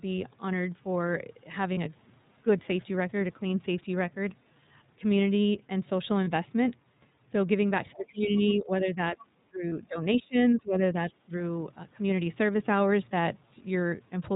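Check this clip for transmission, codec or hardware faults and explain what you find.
Yes, several faults are audible: narrowband codec coloration throughout, three brief dropouts, and a stretch in the middle where the talker is repeatedly pushed down while faint traces of another voice slip in.

iLBC codec: Across the whole clip the speech is band-limited and slightly rough and synthetic, with nothing above 4 kHz. The decoder rebuilds each frame's excitation independently, and the texture fits the 13.33 kbps mode with 30 ms frames. On a spectrogram, energy stops at a hard ceiling at 4 kHz, and harmonics look somewhat smeared rather than cleanly striated.

Lost iLBC frames: At 1.74 to 1.77 s, 6.24 to 6.28 s and 9.69 to 9.72 s, one 30 ms frame goes missing each time. The decoder fills the hole by repeating the last pitch cycle blended with noise, so each gap sounds like a tiny held, buzzy vowel, and clean speech resumes immediately afterward. 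On a spectrogram, each shows as a short block of flat, copied harmonics with a noisier top. In the waveform, a few periods repeat with added noise.

Speech suppressed in double talk: From 7.93 to 8.39 s, 8.55 to 9.32 s, 9.50 to 9.97 s, 10.18 to 10.36 s and 10.55 to 11.35 s, the talker's level dips and parts of the speech drop out. The likely cause is an echo canceller that could not separate the local talker from loudspeaker echo during simultaneous talk, so it attenuated both. The drops reach about 15 dB, and deeper, about 25 dB, near 10.2 s. In the waveform, the envelope is gouged in irregular chunks.

Other side's voice leaking through: At 8.37 to 8.53 s and briefly at 9.20 to 9.24 s, a second voice is faintly audible, about 25 dB below the main talker. This is likely far-end speech from the loudspeaker that the echo canceller left in the microphone signal. On a spectrogram, it appears as weak, fragmented harmonic traces whose pitch pattern differs from the main talker, sitting in and around the suppressed regions.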